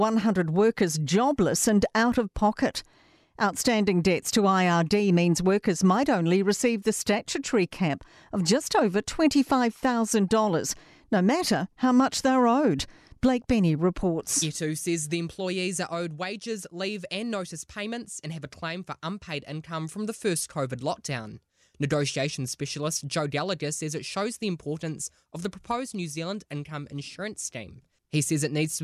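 No technical faults can be heard anywhere here.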